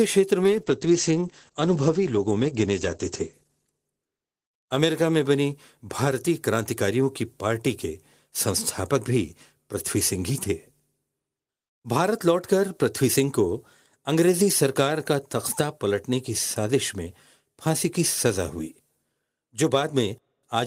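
Speech with a call bitrate drop from 0.44 to 5.91 s: the encoder is starved of bits, coding turns coarse and watery, and the top end is cut to 8 kHz from 20 kHz, consistent with a fall from roughly 32 to 12 kbps, bottoming out for about 2.4 s.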